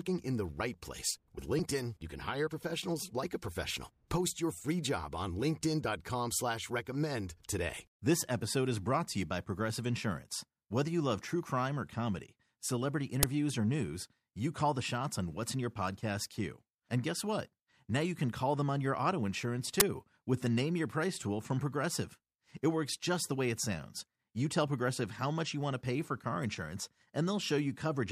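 At 13.23 s and again at 19.80 s there's a sharp, loud burst of digital noise cutting through the speech. That's an uninitialised buffer: a block went out to playback before any audio had been written into it, so whatever junk sat in memory got played as samples. The first burst lasts about 5.8 ms, which fits a 256-sample buffer, and the second about 11.6 ms, consistent with 512 samples.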